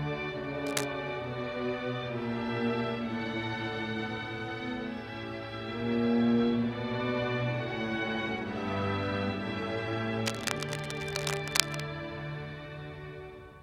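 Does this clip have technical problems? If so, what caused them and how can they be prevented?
Yes. Cable scratch noise at 0.66 to 0.85 s and 10.24 to 11.83 s, nearly as loud as the sound, likely from a worn connector whose contact resistance fluctuated when moved. Replace worn cables and connectors, and secure them so they don't move during recording.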